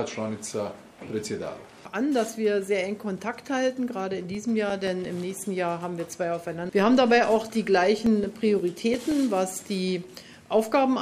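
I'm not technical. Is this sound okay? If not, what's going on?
No. A scratch or blemish on the disc destroyed more data than the player's error correction could rebuild, once on each turn of the disc, so the player patched over the damaged bits. These are CD scratch ticks: small, evenly spaced clicks, each only a few thousandths of a second long, about six or seven a second. There are eight from 4.00 to 5.22 seconds and seven more from 8.06 to 9.12 seconds.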